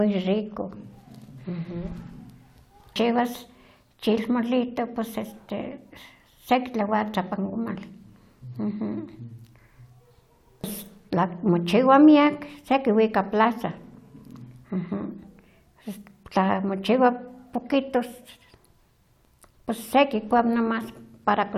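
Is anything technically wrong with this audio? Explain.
No, nothing technically wrong can be heard in this speech recording. There is no moment in it where a technical fault stands out.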